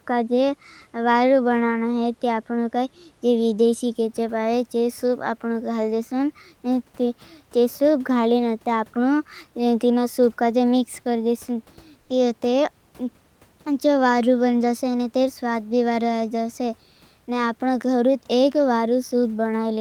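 Right after "कर देश", from 12.01 to 12.09 s, the real background drops out for comfort noise: a flat, featureless hiss about 5 dB quieter, likely discontinuous transmission filling the pause.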